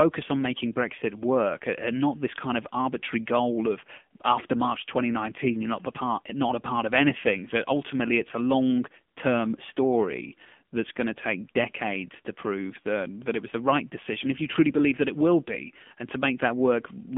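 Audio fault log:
Throughout: AMR narrowband mobile codec. Speech is confined to roughly 200 Hz to 3.5 kHz with nothing above 3.6 kHz, and has a plainly audible buzzy, synthetic texture, which fits a low AMR-NB mode near 7.4 kbps. A plain telephone band filter would narrow the sound without that buzz.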